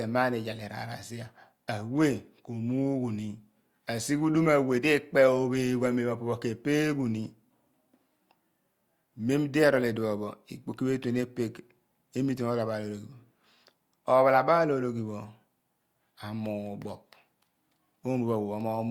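No technical faults are audible anywhere in the speech recording.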